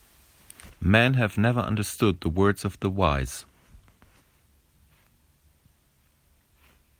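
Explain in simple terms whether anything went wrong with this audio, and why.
Nothing went wrong with this recording: no fault turns up anywhere in it, so it needs no fixing.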